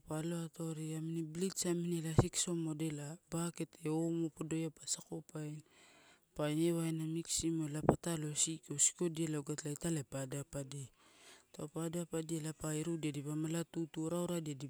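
No technical faults can be heard anywhere in this speech, so there is nothing to place in time order.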